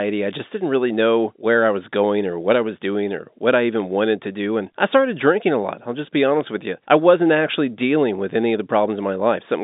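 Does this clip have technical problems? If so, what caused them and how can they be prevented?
Yes. Three sharp, isolated ticks cut through the speech at 0.89 s, between "I just didn't" and "know where I was"; at 3.80 s, after "doing or what I"; and at 6.41 s, before "with you I wasn't". Each is a bit error spike: one flipped bit makes a sample jump by a power of two and snap back, producing a broadband click unrelated to the sound around it. The 6.41 s tick spans two corrupted samples in a row rather than one. The telephone-band sound is capped near 3.8 kHz by G.711 coding. Error-checked memory and a digital link with error detection or correction would prevent these flipped bits.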